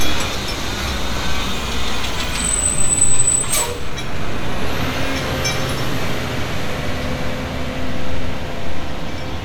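No technical faults can be heard anywhere in this audio; the signal stays continuous and stable throughout.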